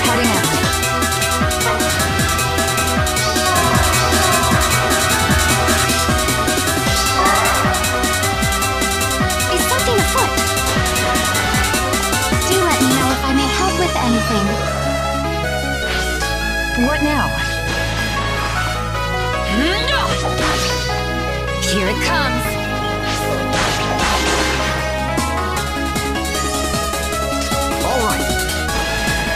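From 3.57 to 5.85 s there's a doubled audio track: a second, equally loud copy trails about 0.7 s behind, likely from an out-of-step edit, starting and stopping abruptly.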